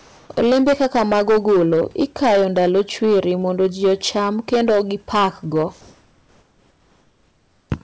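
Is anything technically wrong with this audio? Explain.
Yes, there are two faults.

Hard clipping runs through the whole speech clip. Every loud syllable carries a harsh, gritty fuzz, and the peaks sound squashed rather than crisp. The signal is driven about 12 dB beyond what a stage in the chain can pass, so the waveform tops are sliced flat, on something like 7 percent of samples. Those flat tops generate harmonics high up the spectrum, which the ear hears as distortion. The call path's cut-off near 8 kHz trims only the very top of that added harshness.

Comfort noise in place of the background occupies the opening, from 0.00 to 0.29 s. Before the speech begins, the background is a smooth, featureless hiss, about 2 dB quieter than the real room sound that follows, and it lacks the natural texture heard once the audio proper starts. This likely comes from discontinuous transmission: the sender's voice detector judged the quiet start, sitting about 32 dB below the loud parts, to be silence, and the receiver filled the gap with synthetic noise shaped to match.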